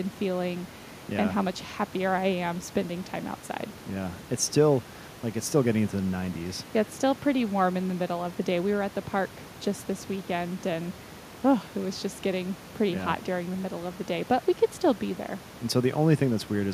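No technical faults can be heard in this speech recording. The background noise of the room sits about 17 dB below the speech and belongs to the recording itself.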